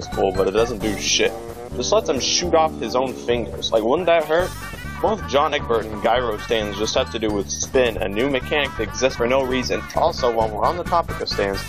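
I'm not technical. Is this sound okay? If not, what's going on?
No. At 5.52 s, about two compressed frames were skipped: a couple of 23.2 ms chunks never played, either missing from the file or refused by the decoder as damaged. The sound jumps ahead about a twentieth of a second.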